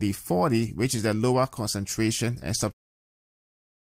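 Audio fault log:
Nothing here needs flagging; the speech just eases out in a gentle fade beginning around two and a half seconds and finishing at 2.74 s.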